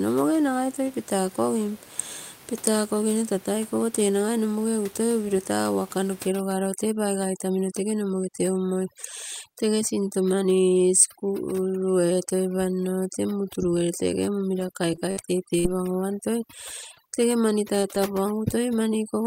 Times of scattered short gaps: 13.97-17.96

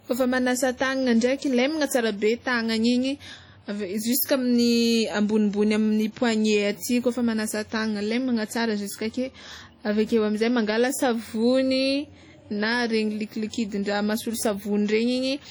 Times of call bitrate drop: none

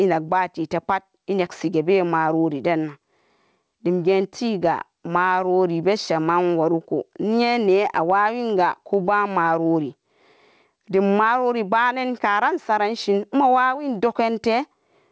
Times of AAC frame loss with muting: none

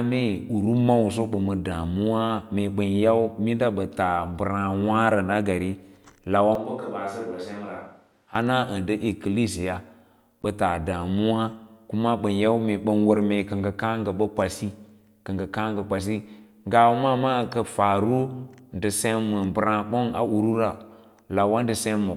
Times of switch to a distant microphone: 6.55-8.35

